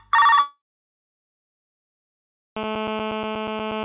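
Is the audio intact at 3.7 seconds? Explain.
No. At 3.7 s the sound carries a GSM phone buzz, which starts at 2.57 s and runs to the end. A nearby 2G handset in a call pulses its transmitter about 217 times a second, and the audio circuitry rectifies those radio bursts into a steady, raspy 217 Hz buzz dense with harmonics, sitting about 11 dB below the signal. Mains hum would instead be a smoother 50 or 60 Hz drone.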